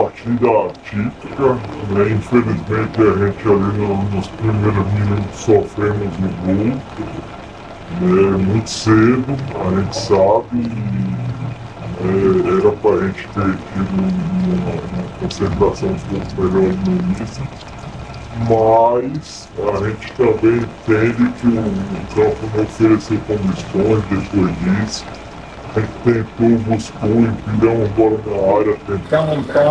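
From 0.0 to 29.04 s the audio has a wrong sample rate fault. It runs at 0.689 times normal speed and sits 6.45 semitones low, so everything sounds slowed and deepened together. That ratio fits 32 kHz material played back at 22 kHz without conversion.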